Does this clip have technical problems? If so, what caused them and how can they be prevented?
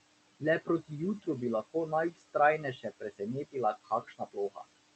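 Yes. Noise suppressor artifacts run through the whole clip. The suppressor pulls the room noise, which sits about 14 dB under the speech, down by about 19 dB between phrases. Its per-frame gain changes make the noise sink between the words and rise under them. A gentler suppression depth or better microphone placement would prevent this.

Speech cut by the noise suppressor occurs at 2.11 to 2.35 s, just after "bi lahko", with drops of about 16 dB. It happens again at 2.63 to 3.21 s (about 13 dB) and at 3.84 to 4.63 s (about 20 dB). In each span the suppressor mistook quiet parts of the speech for background and turned them down with it, so syllables sound swallowed. Raising the speech level relative to the noise, or using less aggressive suppression, would prevent this.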